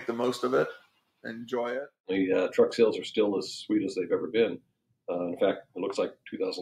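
From 0.79 to 1.25 s and again 4.60 to 4.96 s, sound gets cut by the noise suppressor, which mistakes it for noise and pulls it down by about 18 dB.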